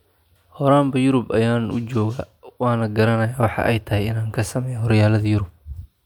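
Speech recording with no audible technical faults anywhere in the clip.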